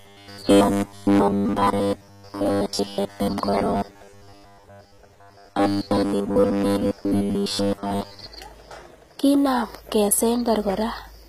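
It's a speech clip, and from 0.01 to 8.26 s it turns into a stiff, metallic buzz at a fixed 100 Hz. That's likely robotic sound from repeated short buffers, with a chunk of about 10 ms looping while most of the real audio gets skipped. The whole way through, nothing reaches above 14.9 kHz and the top end sounds gritty and synthetic, likely HE-AAC compression rebuilding the treble at a low bitrate, something like 20 kbps.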